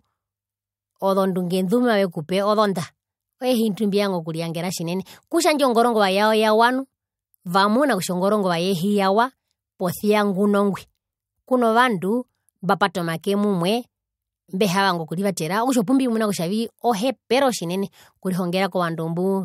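Nothing goes wrong anywhere in this bit of speech, so there's no fault to point to at any moment.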